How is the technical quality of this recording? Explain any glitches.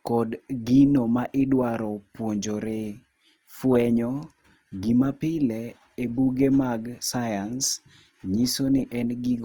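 The recording has plainly audible codec damage from start to finish.

Throughout the speech, the sound has a rough, grainy texture. Voiced passages lose their clean tonal quality and take on a noisy fizz, yet the top end stays present rather than muffled, and there is little of the swirling, hollow character MP3 gives. This is likely Opus compression in its CELT music mode, at a low rate that fits around 24 kbps. Short of bits, the encoder keeps each band's overall energy but fills in the detail by folding lower bands upward or with noise, so tones turn gritty instead of leaving holes in the spectrum.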